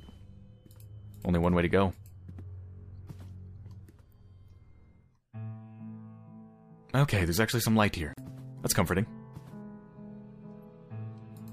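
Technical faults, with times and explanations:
8.13–8.18 s: gap at a join of encoded pieces. Separately encoded pieces were joined without trimming, so the earlier piece's final-frame padding and the next piece's start-up delay remain as silence. The sound cuts out for 41 ms with smeared edges, then resumes where it stopped.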